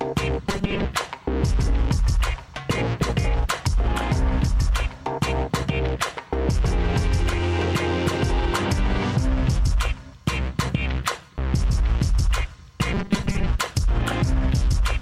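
From 0.46 to 0.86 s, and again from 12.94 to 13.48 s, the sound turns into a rigid metallic buzz at 200 Hz. This is robotic sound from repeated short buffers, likely from a 5 ms block being replayed while about half the real audio is skipped.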